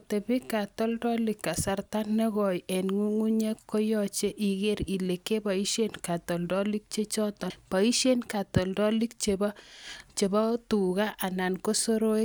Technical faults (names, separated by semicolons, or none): damaged data in a compressed stream